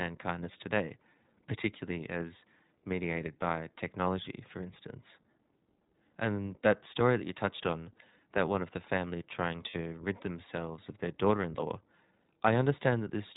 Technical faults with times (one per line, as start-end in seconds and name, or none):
0.00-13.37 iLBC codec
9.70-9.76 lost iLBC frames